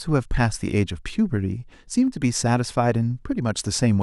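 From 0.45 to 0.56 s the speech is broken up by DAB burbling. Under weak reception, bit errors slip past the error correction into the MP2 audio data, and even a small error rate, under a tenth of a percent, is enough. The corrupted samples put short blips of noise in single sub-bands, across a short run of frames. The result is a run of short blips laid over the speech. Unlike a dropout or packet loss, the programme never falls silent or repeats. It keeps running underneath, with band-limited blips riding on top.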